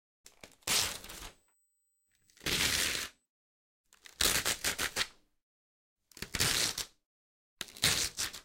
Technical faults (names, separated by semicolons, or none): USB whine